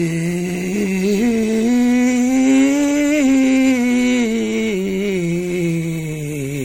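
A music clip with generation loss throughout: swirly, hollow and smeared, nothing above 16.5 kHz, likely from around seven MP3 passes near 60 kbit/s.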